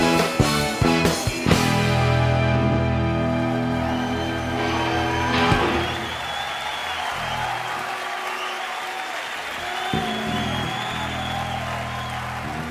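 No technical fault can be heard anywhere in this audio. There is nothing in the sound that calls for a time or a cause to be given.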